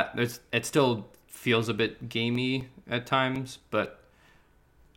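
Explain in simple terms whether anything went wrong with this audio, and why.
From 2.35 to 4.86 s, just after "still feels a bit", the speech ticks every 0.25 s: periodic USB or driver dropouts, each blanking a few milliseconds.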